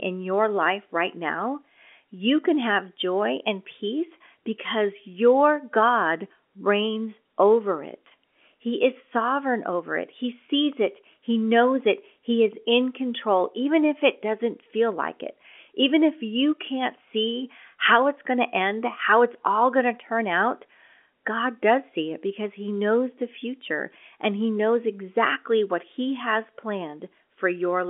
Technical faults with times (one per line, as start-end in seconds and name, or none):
10.46-10.48 packet loss with pitch repetition